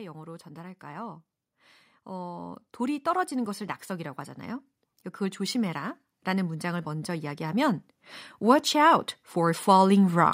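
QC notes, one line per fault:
0.14–4.24 s, 5.17–7.82 s and 8.40–10.28 s: automatic gain rising. The level control judged the input too quiet and turned it up slowly. Speech and background swell together, by about 6 dB in the first two ramps and about 4 dB in the last.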